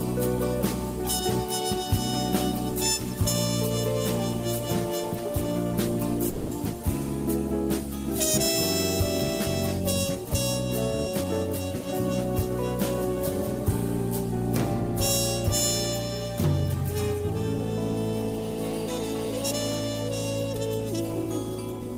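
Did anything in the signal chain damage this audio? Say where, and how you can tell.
Yes. At 6.29 to 6.53 s there's a call audio freeze. The last bit of sound gets drawn out and fades for about 220 ms, then carries on with nothing lost. Packets were likely held up on the network, so the jitter buffer ran dry and concealment bridged the wait.

Right at the end, 21.25 to 21.96 s, you get a jitter buffer speed-up. It plays at 104% speed with the pitch unchanged. The receiver trimmed out tiny pitch-period slices, around 40 ms in total, to shrink the buffer back down.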